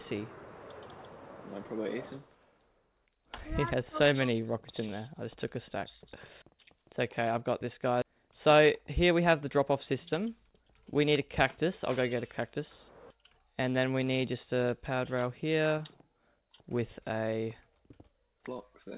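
At 8.02 s a skip ahead drops roughly 0.7 s of audio while later audio waits. Playback jumps straight across with no silent gap, unlike a dropout. From 9.04 to 9.58 s a jitter buffer speed-up trims short pitch-period pieces, around 50 ms in all, so the sound runs about 8% faster at the same pitch, which sets it apart from a pitch shift. Through the G.711 mu-law path, nothing above 4 kHz is heard.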